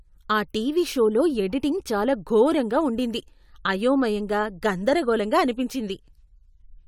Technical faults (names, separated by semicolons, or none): none